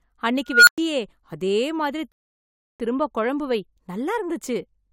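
A squealing tone of around 1.5 kHz erupts in the speech at 0.49 s. It swells to a harsh, clipped peak within roughly 0.18 s and then drops to dead silence for about 0.11 s before the signal returns at 0.78 s. This is an unstable filter. A recursive filter running with bad coefficients feeds its own output back with too much gain, so the tone grows unchecked until the values clip and overflow. The output goes silent until the filter resets. Later, from 2.12 s to 2.80 s, the audio stops dead and then picks up exactly where it left off, with nothing skipped. That pattern is a rebuffering stall. The player exhausted its downloaded audio and paused until more data arrived, inserting about 0.68 s of silence that lengthens the clip without removing any of its content.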